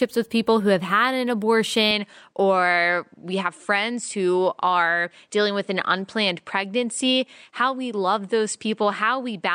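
At 1.91 s the speech changes character and stays that way to the end. The top of the band disappears, with nothing above 9.6 kHz. The sound turns duller and boxy. There is no gap at the change, and the level stays about the same. A faint new background noise arrives, roughly 55 dB below the speech. The likely cause is an input switched to a poorer device, such as another microphone with a narrower band and its own noise.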